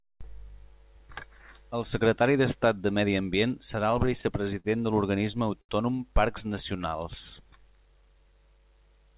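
Speech over a narrowband call link that stops at 4 kHz, which fits G.711 A-law at 64 kbps, and it has three timing problems. From 3.76 to 4.66 s there's repeated stalls (stutter): packets kept turning up late, the jitter buffer ran dry six times, and the receiver stretched the last sound each time, about 104 ms of fill in total with the longest gap 46 ms, so it drags and stutters without anything actually going missing. At 5.61 to 5.71 s there's a short stall from a late packet: one packet missed its slot, the sound gets held for 78 ms until it lands, and playback then carries on from the same spot, leaving a slightly drawn-out moment. Then from 6.52 to 8.32 s comes a jitter buffer slow-down, where the receiver rebuilds its reserve by repeating single pitch periods and bits of pauses, adding about 107 ms and running at 94% speed, so the speech sounds slower at unchanged pitch with stretched-out sounds.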